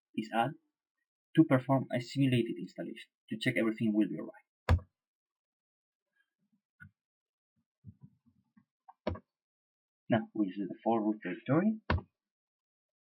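From 0 to 8.14 s the audio shows imaging from linear upsampling, consistent with a 12 kHz source raised to 48 kHz by straight-line interpolation. That weak filtering dulls the top end and leaves mirrored spectrum from 6 to 12 kHz, roughly 35 dB down, heard as a faint metallic shimmer.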